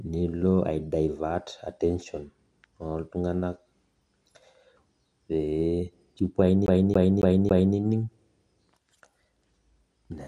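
Speech that stutters from 6.66 to 7.77 s, the same short slice repeating four times with a brief mute at each jump: a CD stuck on one turn, looping about 276 ms per disc rotation.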